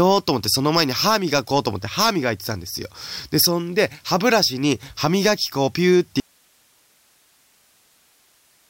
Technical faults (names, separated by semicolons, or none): audio dropout to a faint residue